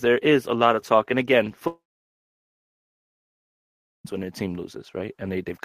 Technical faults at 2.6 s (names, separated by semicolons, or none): long network dropout